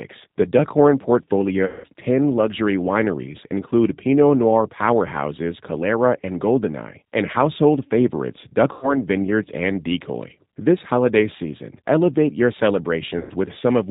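Speech, and the whole clip plainly carries the G.729 codec sound: nothing above 4 kHz, a rough, slightly synthetic edge, which fits G.729A at 8 kbit/s. There's VoIP packet loss concealed by the speech codec at 1.66–1.86 s, at 8.73–9.00 s just after "and household favorites", and at 13.18–13.33 s. Each time the decoder stretches its last frame into a fading buzzy tone or coloured noise, which fits roughly 180, 90 and 120 ms of lost frames.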